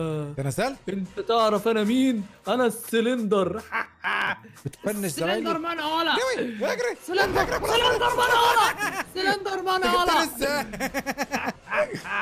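The processor fell behind between 3.85 and 4.35 s, missing about fifteen deadlines over that stretch for buffers of around 5 ms each. Every missed buffer was skipped, leaving a tiny hard-edged gap, and together these produce a burst of processor overload crackle, a gritty tearing over the sound that stops once the load eases.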